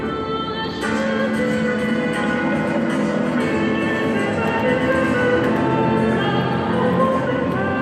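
The audio carries a doubled audio track from 4.44 s to 7.20 s, where a second full-band copy of the same sound runs roughly 100 ms behind the original at about 5 dB lower level, appearing and vanishing abruptly with no decay or room colour. The likely cause is the signal being captured again through a slower path, or an edit holding two copies out of step. A spectrogram shows every event repeated as a fainter twin shifted right, and the waveform shows shadow transients trailing each onset.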